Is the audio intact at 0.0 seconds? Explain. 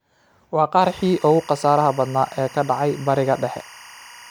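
Yes, at 0.0 seconds the audio is intact, with no fault audible at that moment.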